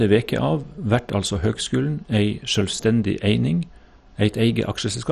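MP2 compression, throughout: the speech sounds dull and gurgling, with nothing above 13.2 kHz, likely from heavily starved Layer II sub-bands, which fits roughly 56 kbps.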